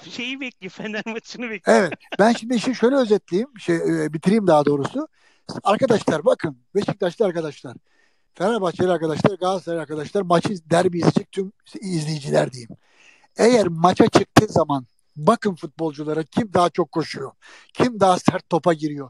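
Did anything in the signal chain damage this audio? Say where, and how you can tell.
No, nothing along the chain seems to have touched it, and there's nothing in what I'm hearing that I'd trace back to any stage.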